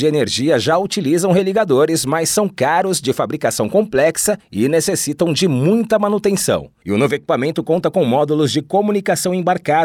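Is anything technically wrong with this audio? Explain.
No, nothing technically wrong can be heard in this speech clip. Listening through it, there is no fault to point to at any moment.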